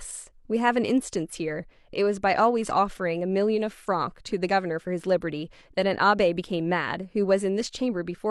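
Nothing in the recording stood out as a technical problem on listening.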